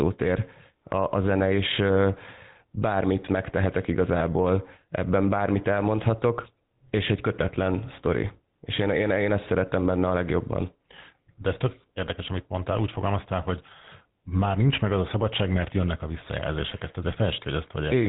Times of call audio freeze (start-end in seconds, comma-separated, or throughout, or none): none